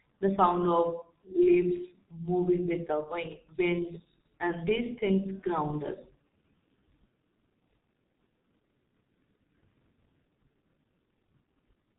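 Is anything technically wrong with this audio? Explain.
Yes. The speech has passed through the G.723.1 codec, and the damage is heavy. It runs through the whole clip. This codec squeezes speech into a very low bitrate by modelling the voice in 30 ms chunks. The result here fits a rate near 6 kbit/s. Nothing above about 3.8 kHz survives, so the sound is dull and muffled. The coarse, slow voice model adds a hoarse, rough edge. Consonants smear together.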